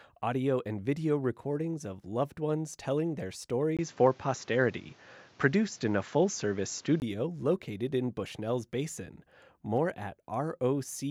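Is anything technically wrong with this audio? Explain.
Yes. From 3.77 to 7.02 s the input was likely switched to a poorer device with a narrower band. Nothing above 7.6 kHz survives, dulling the speech. The level shifts by about 5 dB, new noise sits roughly 30 dB down, and a 20 ms silence marks the switch.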